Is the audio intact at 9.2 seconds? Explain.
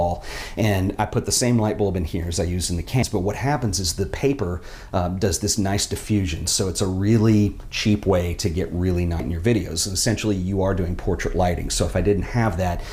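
No, there's a spot of damaged data in the compressed stream right at 9.20 s. That stretch of the file got corrupted, so the decoder either misreads those frames or throws them out, loses its place in the stream, and has to hunt for the next valid frame header before playback carries on. What you hear is a very brief chirp or blip, over in a few milliseconds, cutting into the sound.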